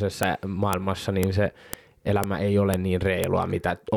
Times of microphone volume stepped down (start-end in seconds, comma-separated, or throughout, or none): none